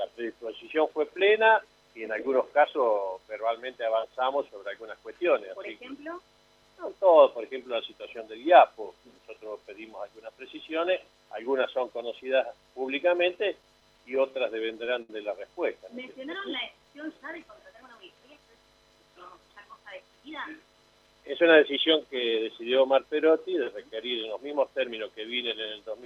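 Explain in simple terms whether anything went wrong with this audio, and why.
From 13.10 to 15.10 s there are repeated stalls (stutter). Network data arrived late ten times. The player stretched the last sound to cover each wait, up to 70 ms at a time.

From 16.72 to 17.61 s a jitter buffer slow-down makes the audio drag at about 91% speed. The player repeated tiny pieces to build a reserve, without changing pitch.

From 19.56 to 21.41 s a jitter buffer speed-up runs the audio at 108% speed. It sounds hurried. The player cut out about 150 ms to reduce its delay.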